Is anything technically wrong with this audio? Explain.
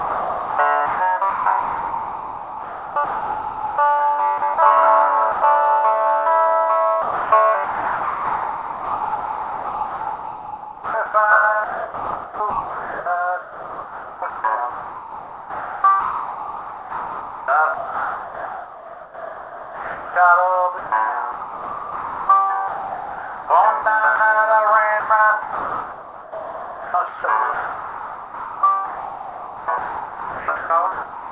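Yes, the audio has repeated holes where it is replaced by synthetic background noise.

Sound chopped by the voice detector, from 0.00 to 3.78 s, 4.38 to 4.58 s, 7.02 to 20.16 s, 20.78 to 24.20 s, and 25.0 s to the end. A sending-side voice detector likely misjudged the sound as background and kept gating it off, with comfort noise filled in each time. The replaced spans run from 80 ms up to about 11 s within the 7.02 to 20.16 s stretch, so the sound keeps breaking up.

Sound dropped by the voice detector, from 5.32 to 5.42 s. Here a single 100 ms piece of sound was likely classed as background by the detector and not sent, so comfort noise plays in its place until transmission resumes. This is heard as a brief gap filled with steady noise. Throughout, the narrowband call path keeps everything below 4 kHz, which points to G.711 A-law at 64 kbps.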